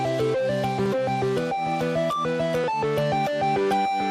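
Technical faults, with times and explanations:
0.86 s and 2.64 s, dropped buffer (overrun): a small jump forward in the sound, losing roughly 5 ms and then 10 ms. This is likely samples overwritten before capture, so the edges join directly with no silent gap, unlike a dropout.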